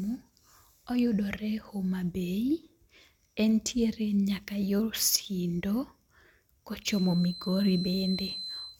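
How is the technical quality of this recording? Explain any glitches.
The recording has one clear fault, in its last two seconds.

A feedback whistle starts at 6.8 s and runs to the end of the clip at 8.8 s. It is a thin, steady tone at 4.1 kHz, sitting about 10 dB below the speech and swelling and fading slowly in level. The likely cause is a loudspeaker-to-microphone loop held just at the edge of feedback, so that one frequency keeps ringing without building into a full howl.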